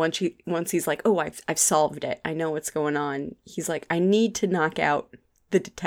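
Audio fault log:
No faults heard anywhere in this speech clip.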